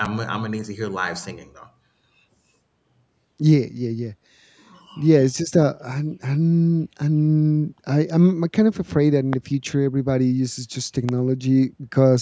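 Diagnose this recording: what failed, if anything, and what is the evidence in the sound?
A voltage step in the analogue wiring, likely from a plug, switch or static discharge, was added to the speech. It is heard as two loud pops, at 9.33 s and 11.09 s, peaking roughly 15 and 10 dB above the speech, with the speech continuing underneath.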